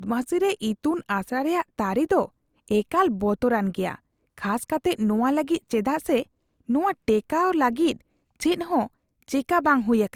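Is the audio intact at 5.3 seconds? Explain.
No. At 5.3 s, as throughout, the speech carries low-bitrate audio saved at a high bitrate: the first encode's codec artefacts persist despite content reaching 20.2 kHz, likely a low-bitrate Opus-like encode re-saved as high-rate MP3.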